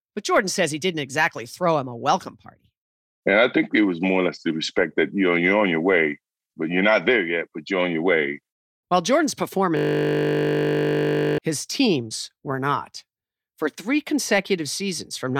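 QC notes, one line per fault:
9.77–11.38 s, system hang loop: a steady 50 Hz buzz before "his teams were not", as a frozen system replays one 20 ms buffer about 80 times.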